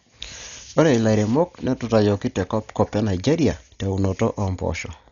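Dolby Digital compression throughout the speech: nothing above 7 kHz, dull and fluttering, likely an AC-3 encoder near 48 kbps leaving bare lines that the decoder fills with noise.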